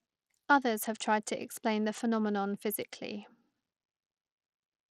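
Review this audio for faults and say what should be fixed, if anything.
The speech carries plainly audible codec damage from start to finish. The treble thins out and flickers rather than stopping at a clean cut-off, and a gritty, grainy noise with aliasing rides on the sound. This is likely Bluetooth SBC compression: its few fixed sub-bands and crude bit allocation starve the upper bands, and the damage fits a low rate around 80 kbps. Unlike the swirly, watery smearing of a low-bitrate MP3 or AAC, this sounds coarse and granular, and the top end drops in and out. To prevent it, record through a wired path, or use a higher SBC bit pool or a better Bluetooth codec.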